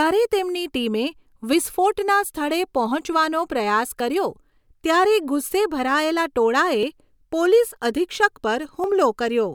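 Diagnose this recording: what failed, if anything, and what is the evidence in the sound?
The capture path at the driver or buffer stage shows two dropped buffers (overrun), at 6.83 s and 8.84 s. At each, the speech jumps forward with no gap, losing roughly 20 ms and 10 ms respectively. The likely cause is the recording software falling behind, so the hardware overwrote unread blocks. On a waveform, each shows as an abrupt step discontinuity. A spectrogram shows a thin full-band vertical line with harmonics shifting abruptly across it.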